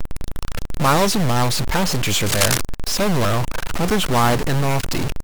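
From start to end, a distortion sits on the speech. Pauses fill with a steady hiss instead of going quiet. This points to a stuck bit, likely a data bit held at one value by a faulty line or converter. About half the samples are thrown off by that bit's weight.

From 2.26 to 2.62 s, dense, uneven bursts of scratching noise cut across the speech, about as loud as the speech itself. This is cable scratch noise, likely from a worn cable, connector or control being moved while its contact resistance jumped around.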